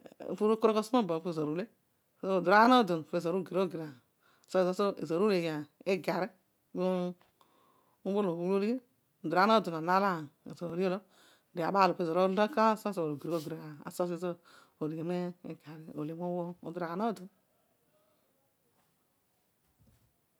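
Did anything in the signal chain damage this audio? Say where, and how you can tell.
Yes. Overlapping chunks at the driver or buffer stage. Each 4.0 s chunk begins 21 ms before the previous one ends, so that 21 ms of speech repeats at every join. This causes evenly spaced stutters at 2.65, 6.67, 10.70, 14.72 and 18.74 s.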